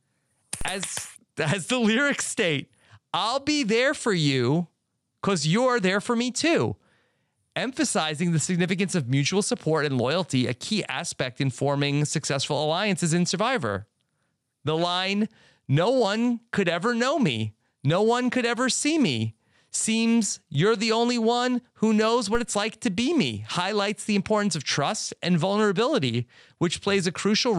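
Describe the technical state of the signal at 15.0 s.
At 15.0 s the speech signal is intact, with no audible technical fault at that moment.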